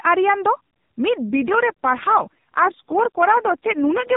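From 1.29 s to the end, an AMR rate drop, consistent with 12.2 falling to 4.75 kbps, turns the speech buzzier and more synthetic, with no gap and no narrowing of the band.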